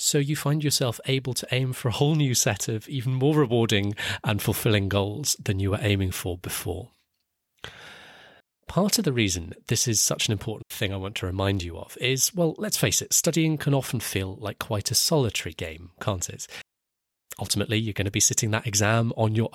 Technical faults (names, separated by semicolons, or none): digital wireless dropout